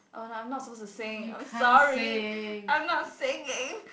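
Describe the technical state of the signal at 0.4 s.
At 0.4 s the audio is intact, with the speech carried by G.722 wideband telephone coding, whose band-limited sound with a faint upper-band hiss fits its lower 48 kbit/s mode.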